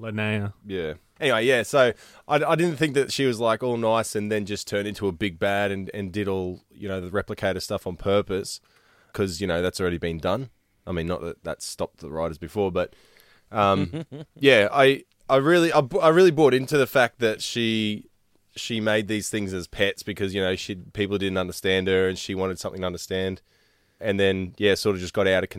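A recording of speech, with no technical fault audible anywhere in it. Nothing goes wrong at any point, so there are no times or causes to report.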